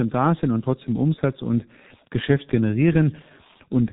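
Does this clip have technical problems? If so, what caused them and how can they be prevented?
Yes. The G.723.1 codec has been applied to the whole speech clip, and the damage is heavy. Nothing above 3.8 kHz survives, and the long 30 ms frames with a slowly updated voice model leave the voice muffled and hoarse, with smeared consonants. This fits a very low bitrate of around 6 kbit/s. A simple low-pass filter or a G.711 phone line would cut the top similarly but keep consonants crisp and the timbre clean. To prevent it, use a wideband codec at a higher bitrate.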